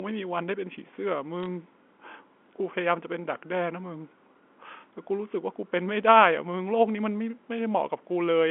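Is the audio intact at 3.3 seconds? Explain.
Yes, at 3.3 s the speech runs on without any dropout, click or distortion, carried through the narrow telephone band of the G.711 line as it is throughout.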